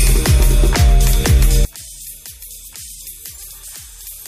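From 1.65 s to the end, the audio collapses by about 23 dB, leaving only a faint residue of the sound. The likely cause is one channel inverted: with one stereo side in reversed polarity, everything common to left and right cancels when the pair is folded to mono, so centred content and low end almost disappear and only the small difference between the channels survives. Before 1.65 s the level is unaffected.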